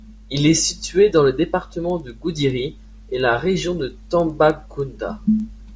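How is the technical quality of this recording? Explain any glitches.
The recording has one clear problem. From 1.9 s to the end, the speech picks up a steady ticking at 10 Hz, one tick every 100 ms. It's the classic sign of a resampler restarted on every block. Each 100 ms chunk was rate-converted on its own, which fits a 48 kHz to 16 kHz conversion, so the filter had no real neighbouring samples at the chunk edges. The small error at each seam comes through as a rhythmic tick riding along with the speech.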